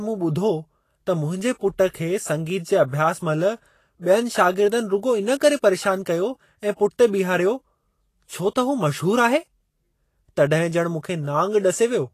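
Vorbis compression runs from start to finish of this speech clip, and the damage is plainly audible. Nothing is present above 14.2 kHz, and the treble below that cut-off sounds grainy and hissy rather than detailed. The cause is likely a low-bitrate Vorbis encode, with the amount of damage pointing to roughly 33 kbps. At that rate the encoder keeps a smooth outline of the spectrum but quantises the upper detail so coarsely that it turns into noise of similar energy, roughening tones and softening consonant attacks.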